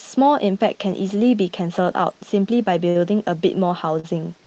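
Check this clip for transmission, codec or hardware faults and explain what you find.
Two short stalls from a late packet break the flow of this speech, at 2.89 to 2.97 s and again at 4.00 to 4.05 s. In each, a packet missed its playout time and the jitter buffer ran dry, so the receiver held the last sound for about 57 ms and then about 38 ms until the packet arrived, resuming from the same point. Nothing is lost, but the sound at each spot lingers unnaturally, with a faint buzzy, slightly dipped quality, and everything after it lands that much later.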